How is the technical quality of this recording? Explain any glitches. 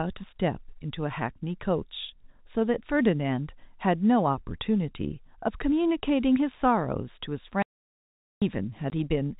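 The recording has two clear glitches near the end, both gaps of digital silence, on top of a telephone-band signal that stops at 4 kHz, as G.711 coding does.

From 7.62 to 8.42 s there is an audio dropout to silence lasting about 0.79 s. The sound cuts off mid-flow and returns just as abruptly, with no room tone in between, so whatever was said there is lost. The likely cause is the input briefly disappearing, through a disconnected device, a failed link or a mute, while recording carried on writing zeros. On a waveform it is a flat line, and on a spectrogram a dark vertical band.

At 8.90 s a single packet was lost and filled with silence, leaving a 20 ms hole. The receiver had nothing to play for that packet and inserted zeros, so the speech is chopped by a tiny gap with hard edges. On a waveform it is a thin flat notch with abrupt cut-offs, and on a spectrogram a narrow dark stripe.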